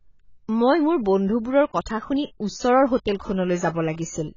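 From the start, the speech sounds dull and smeared, with a warbly, fizzy edge on sibilants. This is likely AAC compression at a very low bitrate, perhaps near 16 kbps. On a spectrogram, nothing appears above 7 kHz.

At 1.66 to 1.72 s, just before "কথা শুনি ওচৰৰ", pre-echo puts a short hiss about 56 ms ahead of a sharp onset. The codec spread noise meant for the loud attack across its whole block, so that noise also filled the quiet gap before it. On the waveform, a low smear of noise leads the attack, and a spectrogram shows a broadband haze just before the onset's vertical edge.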